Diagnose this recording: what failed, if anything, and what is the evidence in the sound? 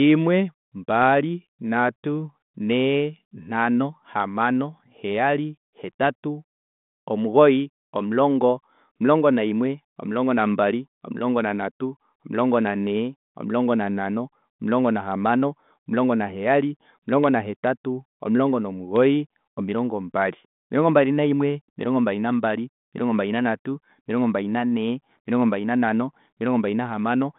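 Nothing failed; the narrowband telephone path behaves as designed.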